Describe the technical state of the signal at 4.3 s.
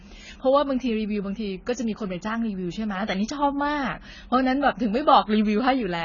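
At 4.3 s, as throughout, the speech is dull and fizzy, with nothing above 7 kHz. This is likely heavy AAC compression near 16 kbps, which strips the upper bands.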